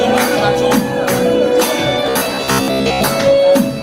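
From 2.07 to 3.07 s, robotic sound from repeated short buffers: a rigid 66.7 Hz buzz, likely from a 15 ms chunk looped while most real audio is skipped, showing as evenly spaced vertical striations on a spectrogram.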